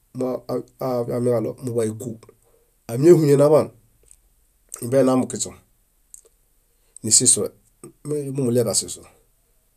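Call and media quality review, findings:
Nothing to flag on this speech recording; no dropouts, glitches or other problems turn up anywhere in it.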